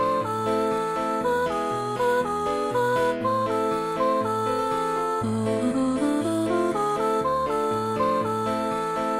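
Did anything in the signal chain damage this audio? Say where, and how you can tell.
No, nothing in the signal chain stood out as damaging this audio on listening.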